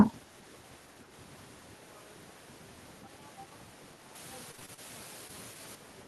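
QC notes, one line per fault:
4.15–5.75 s, low bit depth with dither: the audio drops to about 7 bits, so a steady, even hiss sits only about 10 dB under the signal, with no distortion.
4.51–4.79 s, repeated packet loss (robotic sound): five gaps in quick succession, the longest 32 ms, each patched by stretching the last sound, so it turns choppy and robotic.
5.27 s, short concealed packet loss: about 20 ms never arrived and was briefly papered over by continuing the prior sound, heard as a quick smear or wobble.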